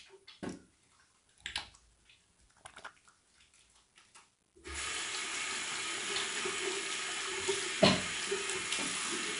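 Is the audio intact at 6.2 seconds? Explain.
No. At 6.2 s, as throughout the clip, 4-bit ADPCM compression is coding each sample as a coarse step from a predicted value, at a rate that points to about 88 kbps. This leaves a gritty hiss riding on the louder sound, with nothing above about 10.6 kHz.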